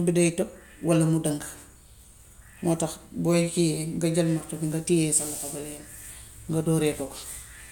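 No technical faults can be heard anywhere in the recording.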